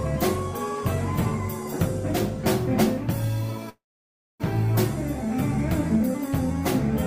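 At 3.69 s there's a call audio freeze lasting about 0.7 s: a brief fading buzz, then near silence until 4.42 s, likely packets stalling. Nothing's lost, it just resumes later.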